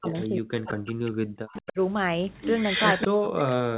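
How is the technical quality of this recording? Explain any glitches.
The quality is poor. It is a narrowband call recording, with nothing above 4 kHz, as a 64 kbps G.711 path would give. Two faults recur.

Speech suppressed in double talk occurs from 0.00 to 1.47 s, from 1.72 to 1.78 s, and from 3.07 s to the end. The level drops by as much as about 40 dB in the first and last stretches, and about 25 dB in the brief middle one. The likely cause is an echo canceller that could not tell this talker from loudspeaker echo while both sides spoke. It turned everything down. The speech fades.

Echo leak appears at 0.08 to 0.25 s, 0.70 to 0.91 s, 1.53 to 1.73 s and 2.42 to 3.07 s. It is a delayed copy of the speech, arriving 199 ms late. It sits about 10, 15, 10 and 5 dB below the speech, so the last one is loudest. The likely cause is an echo canceller on a speakerphone end that left part of its microphone pickup in place and sent it back. 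It sounds like a repeat just behind the talker.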